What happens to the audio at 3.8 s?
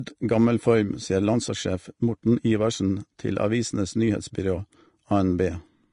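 At 3.8 s the speech carries the same hissy, grainy texture heard across the whole clip, with roughened tones and smeared consonant attacks, most likely Vorbis compression at a low bitrate, consistent with around 36 kbps. The encoder discards everything above about 10.6 kHz and quantises the remaining treble so coarsely that fine detail turns into noise. A spectrogram shows a hard ceiling at 10.6 kHz with speckled, blotchy energy below it.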